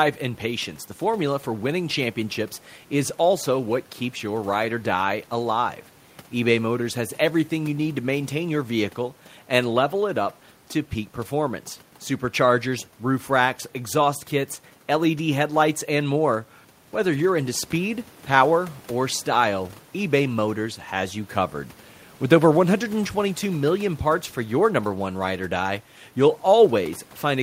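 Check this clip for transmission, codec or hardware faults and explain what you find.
No transmission, codec or hardware faults turn up in this speech; the only background is ordinary room noise sitting about 30 dB below the voice.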